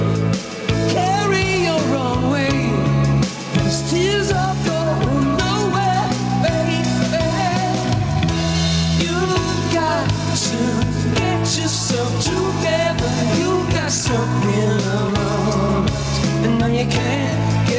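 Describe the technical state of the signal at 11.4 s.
Gain pumping is present at 11.4 s, as it is across the whole clip. The level keeps breathing, with a swing of around ten decibels. The likely cause is an input gain set far too high, with a fast limiter or compressor clamping it back on every peak. Loud and soft parts sit close together, so the sound feels squashed. The call path's G.722 coding leaves nothing above 8 kHz.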